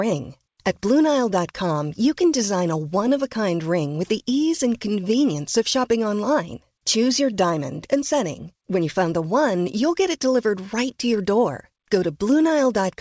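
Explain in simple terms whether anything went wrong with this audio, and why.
Listening through the speech, nothing stood out to me as having gone wrong.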